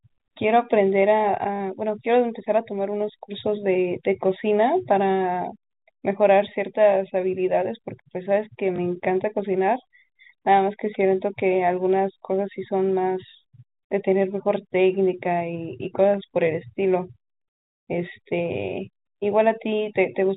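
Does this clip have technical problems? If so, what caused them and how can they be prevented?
Yes. Packet loss with the last packet repeated causes a short robotic stutter at 1.56 to 1.60 s, which fits two lost 20 ms packets, and a small blip at 8.76 to 8.78 s. The receiver replays the previous chunk, so the stutter buzzes at about 50 Hz. Unlike a dropout, the gap is filled with repeated sound rather than silence. It can be prevented with a larger jitter buffer, forward error correction, or smoother concealment. The G.711 telephone band is audible throughout, with nothing above 4 kHz.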